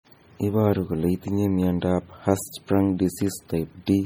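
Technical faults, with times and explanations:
Throughout, MP3 compression: the speech has a watery, swirling texture, with chirpy, metallic edges on s sounds and softened consonant attacks. The damage is heavy, and the likely cause is low-bitrate MP3 encoding, which fits a rate around 32 kbps. Short of bits, the encoder drops weak frequency components that flicker in and out between frames, producing the swirl and chirps.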